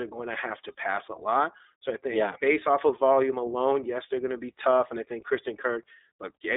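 Throughout the speech, the iLBC codec limits audio to a 300 Hz to 3.7 kHz line band with nothing above 3.8 kHz, and its independently coded 20 ms frames leave a plainly audible rough, synthetic edge.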